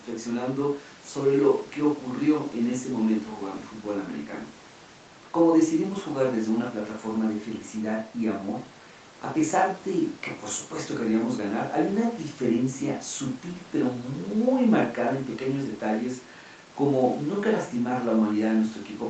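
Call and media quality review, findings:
No faults found; call path audio sounds as expected.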